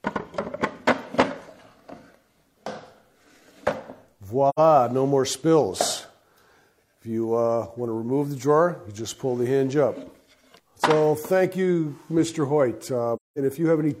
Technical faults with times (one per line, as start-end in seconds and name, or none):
4.49-4.60 AAC frame loss with muting
13.15-13.38 AAC frame loss with muting